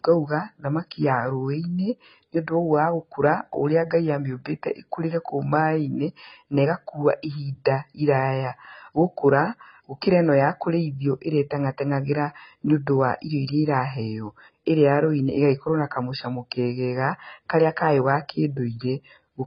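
From start to finish the speech sounds dull and smeared, with a watery, warbling fizz on sibilants and held sounds and nothing above 5.1 kHz, which is likely AAC compression, AAC-LC squeezed to a very low rate, around 16 kbps.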